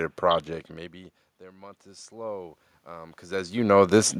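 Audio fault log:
1.46–3.62 s, automatic gain rising: Just after "project maybe" the input level falls by about 24 dB, and the automatic gain control, finding the signal too quiet, raises its gain slowly by about 7 dB over a little more than two seconds. Because that gain applies to everything the microphone picks up, the speech and the room noise swell together, so the background climbs steadily along with the voice instead of holding still.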